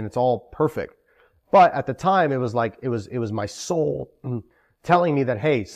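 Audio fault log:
No faults detected in this speech recording.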